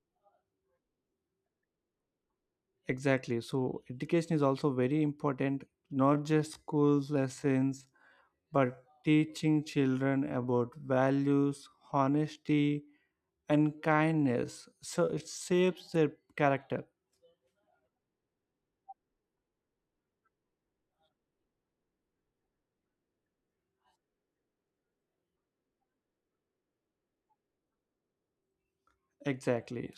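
Software likely stretched this speech clip to fill a longer slot by repeating short pieces while holding pitch, a time-stretched section from 6.00 to 16.06 s. There the pace suddenly drops to about 0.69 times normal speed, with unchanged pitch.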